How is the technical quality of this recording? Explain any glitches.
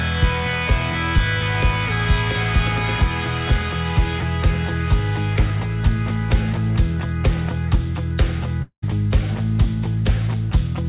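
The recording has two clear glitches near the end, both on top of narrowband call audio with nothing above 4 kHz, which fits a G.711 mu-law codec at 64 kbps.

From 8.62 to 8.84 s there is a long network dropout. Audio likely stopped arriving for about 200 ms, and the receiver papered over the gap by extending the last sound. That fill fades into roughly 90 ms of silence before the audio resumes with that stretch gone.

From 9.64 to 9.67 s there is a single loud pop. A sudden voltage step or pulse, likely from a plug, switch, static or driver glitch, entered the signal. It cuts through as a sharp click a few dB above the sound while the sound continues underneath.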